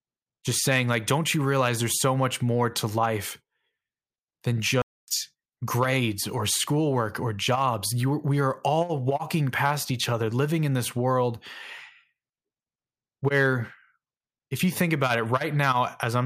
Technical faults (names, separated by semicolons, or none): playback stall